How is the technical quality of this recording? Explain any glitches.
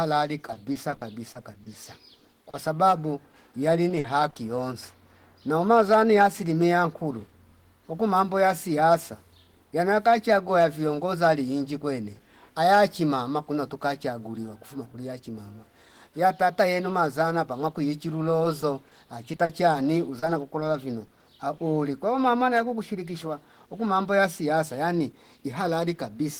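The recording has clear network-transmission damage: four stretches of repeated packet loss that make the speech sound choppy and robotic, plus two isolated concealed dropouts.

Repeated packet loss (robotic sound) occurs at 0.46–2.54 s (12 gaps, 250 ms filled, longest 50 ms), 3.89–4.36 s (5 gaps, 110 ms, about 23% of that stretch, ending just before "yonsi nouma zani yasili"), 18.43–19.74 s (10 gaps, 160 ms, right after "yenu mazana papwa kuwichi") and 20.19–21.22 s (7 gaps, 100 ms). The decoder keeps extending the previous sound into each hole, and because the holes come back within fractions of a second, those repeated extensions produce a choppy sound with pieces missing. That clustering is what separates it from the isolated fault below.

Short concealed packet loss occurs once at 3.31–3.34 s (20 ms filled) and once at 21.57–21.59 s (10 ms filled, just before "kwao mama yaku kushirikishwa"). 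Each is a single brief hole that the receiver bridges by continuing the last sound and then blending back into the real audio. It comes across as one small smear or wobble. Because it stands alone, with no run of gaps around it, there is no sustained robotic texture as in the clustered stretches.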